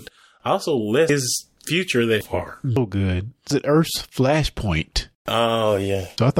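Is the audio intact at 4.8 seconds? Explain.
Yes, at 4.8 s the speech carries on without any audible fault.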